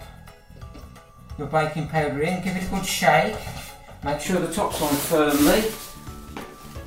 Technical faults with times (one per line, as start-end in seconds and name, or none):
0.00-4.26 channel delay (comb filtering)